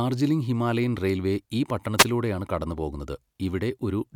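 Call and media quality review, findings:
Wireless microphone noise hit, 1.98–2.05 s, right after "ഹിമാലയൻ റെയിൽവേ ഈ". Brief static swish for about 70 ms. Probable component: analogue FM radio mic link and receiver. Mechanism: multipath reflections cancel the carrier, the signal fades, and receiver noise rises over the audio. Recovers at 2.05 s.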